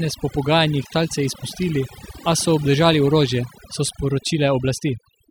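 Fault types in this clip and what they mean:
Overdone noise removal: a noise reduction stage was set far too aggressively for the noise in this recording, so it pushed individual frequency bands down almost to nothing whenever their level sat close to what it judged to be noise. Across the whole speech clip the gaps between phrases collapse into near silence flecked with twinkling, chirpy specks, and the softer parts of the voice are stripped away with the noise.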